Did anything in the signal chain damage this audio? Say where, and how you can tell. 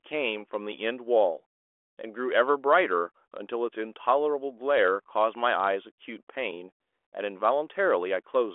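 No, nothing in the chain has hurt this one; it's simply telephone-band speech through G.726 ADPCM at 40 kbit/s, so it sits in roughly the 300 Hz to 3.4 kHz line band with nothing above about 3.8 kHz, which is what that path gives you.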